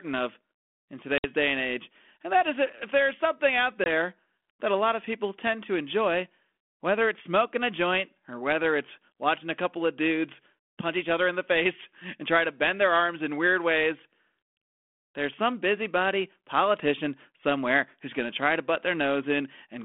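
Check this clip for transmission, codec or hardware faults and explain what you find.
Two short dropouts come from packet loss on an ADPCM call, carried over a G.726 line at 32 kbit/s that caps the audio near 3.4 kHz.

The first runs from 1.18 to 1.24 s, between "of in" and "day and age and". It removes about 60 ms, a few packets. The second runs from 3.84 to 3.89 s, after "if there's something out", and removes about 20 ms, roughly a single packet. The missing stretches are filled with silence. When audio resumes, the decoder's adaptive predictor and step size no longer match the sender's, so the speech comes back with some distortion that settles within tens of milliseconds. The waveform shows each as a flat, hard-edged gap. The spectrogram shows a blank vertical column, with any click appearing as a thin vertical streak.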